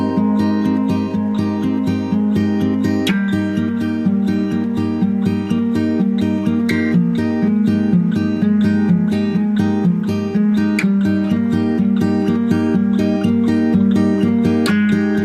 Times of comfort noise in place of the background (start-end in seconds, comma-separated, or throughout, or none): none